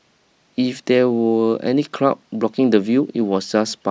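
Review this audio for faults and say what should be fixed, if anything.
Nothing here needs fixing, since no faults turn up anywhere in this bit of speech.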